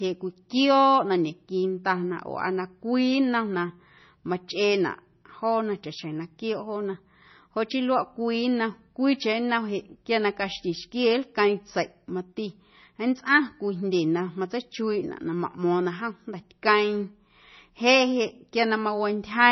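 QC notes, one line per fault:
Throughout: likely MP3 compression. Nothing above 5.9 kHz, with heavy watery swirl and smeared consonants that a clean low-pass wouldn't add, pointing to roughly 24 kbps.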